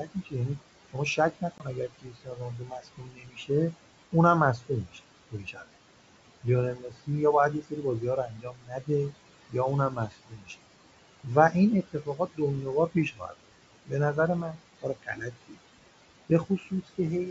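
Throughout the clip, the background sinks between phrases and swells back up under the speech. These are noise suppressor artifacts. The suppressor pulls down, frame by frame, whatever bands it judges to be steady room noise, by about 17 dB.

From 0.05 to 5.64 s, then at 6.44 to 7.08 s, 8.28 to 10.51 s, 11.23 to 13.92 s, 14.54 to 15.57 s and 16.29 to 16.99 s, soft consonants and word endings turn faint or swallowed, dipping by up to about 18 dB. This is speech cut by the noise suppressor, which mistook quieter parts of the speech for noise. The first span suffers most, with roughly a second and a half affected.

At 1.58 to 1.63 s, inside that first span, a hard-edged hole of about 20 ms opens, and the speech returns slightly distorted before settling. This is packet loss on an ADPCM call, and it points to a single lost packet. The G.722 decoder's adaptive predictor and step size drift out of step with the sender's until they realign.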